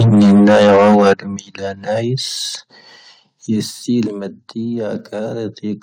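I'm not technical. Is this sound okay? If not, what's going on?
No. The first second, up to 1.13 s, has microphone overload: the speech is harsh and crackly because the loudest parts are flattened at the top. The likely cause is a microphone input set too high for the recording.

The microphone volume also stepped down three times, at 0.15 s, 1.14 s and 4.08 s, each an abrupt drop in loudness. The likely cause is the call software lowering the input level to counter the overload, with the biggest drop at 1.14 s.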